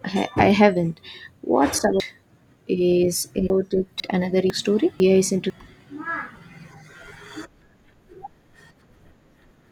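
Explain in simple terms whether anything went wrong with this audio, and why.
Chunks out of order, 2.0 to 4.0 s and 4.5 to 5.5 s: half-second pieces of speech play late (three pieces late, then one), causing jumbled moments.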